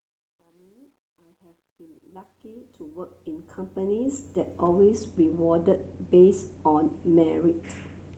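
Speech fading in from silence over the first 4.86 s shows truncation distortion on the fade. The gain stage drops low-order bits without dither, consistent with an 11-bit word length. From 0 to 2.69 s the quiet audio turns gritty. The waveform shows staircase steps, and the spectrogram shows broadband speckle. The Opus coding does only light damage.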